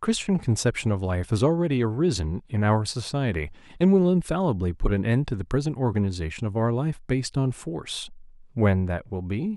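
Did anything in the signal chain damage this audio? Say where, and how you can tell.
No, none of the stages from capture to playback leaves an audible mark on this speech recording, and the signal holds steady throughout.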